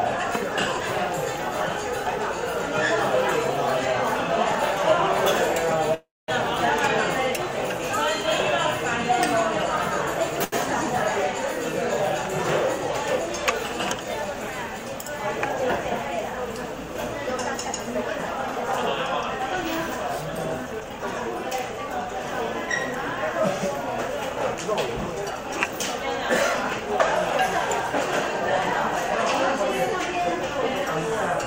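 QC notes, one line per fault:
5.94–6.30 s, call audio freeze: the sound is drawn out as a fading buzz or hiss, then about 220 ms of silence, and it resumes exactly where it stopped. That adds a 339 ms gap with nothing lost, likely from delayed packets leaving the jitter buffer empty.
10.44–10.54 s, short stall from a late packet: one packet missed its slot, the jitter buffer ran dry, and the receiver held the last sound for 81 ms until it arrived. Playback then continued from the same point with nothing missing, so a sound lingers too long.
12.78–14.25 s and 19.58–26.93 s, jitter buffer speed-up: the jitter buffer had built up more delay than its target, so the receiver trimmed repeated pitch-period-length slices, roughly 70 ms and 300 ms in total, to catch up. Playback runs at 104% speed with unchanged pitch.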